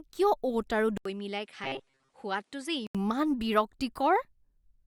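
A speech clip in which, right after "অ'ট আৰু" at 0.97 s, the sound drops out for 80 ms and returns duller, a little quieter and over a new background noise, until it clears again at 2.95 s. That is most likely an input switched to a poorer device, a narrower-band microphone with its own tone and noise. Inside that stretch, from 1.64 to 2.10 s, the voice turns into a rigid metallic buzz at 134 Hz that still roughly tracks the speech. This is robotic sound from repeated short buffers, likely caused by a segment of about 7.5 ms being replayed to cover late-arriving audio, so that most of the real signal in that span is skipped.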